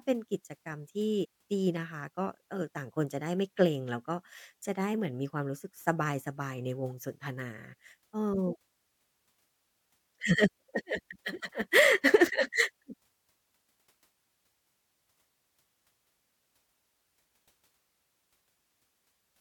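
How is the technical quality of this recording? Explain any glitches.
One glitch stands out. Compressed frames skipped at 1.23–1.25 s: a run of coded frames never plays, so the speech jumps ahead about 70 ms, which fits roughly three 23.2 ms frames. The jump leaves an abrupt join where the missing audio was cut out.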